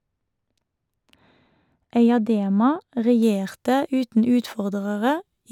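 From the start to about 3.22 s the speech sounds dull and muffled, its top end smoothly rolled away. This is de-emphasis applied wrongly: a treble cut intended to reverse pre-emphasis either hit audio that lacked it or was applied twice, leaving 10 kHz about 13 dB below 1 kHz.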